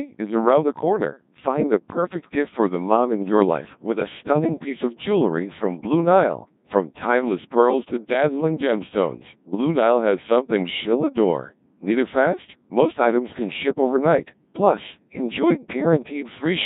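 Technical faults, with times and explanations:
Throughout, Codec 2 vocoder: the speech comes out robotic and buzzy, heavily damaged, with a coarse, smeared quality which fits the 1.6 kbit/s mode. Only pitch, voicing, energy and a rough spectral envelope survive, and the decoder rebuilds the voice from sine waves. On a spectrogram, harmonics look unnaturally regular and formants blurred; the waveform shape bears little relation to the original.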